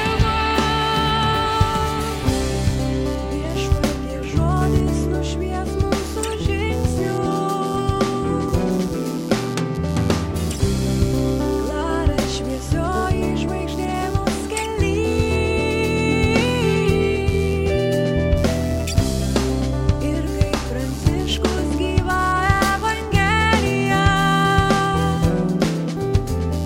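Computer activity noise runs throughout: processor, graphics or mouse load disturbs the shared audio ground, adding pulses near 100 Hz, roughly 25 dB below the sound.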